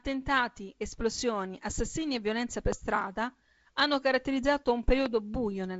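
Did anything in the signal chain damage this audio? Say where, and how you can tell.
Yes, two loud pops, likely from a glitch in the analogue wiring or a switch. The first is at 2.72 to 2.74 s, after "assassinii e violenza per". The second is at 5.06 to 5.08 s, after "per strada hanno caratterizzato". Each is a single sharp pulse around 15 dB above the speech, which carries on underneath.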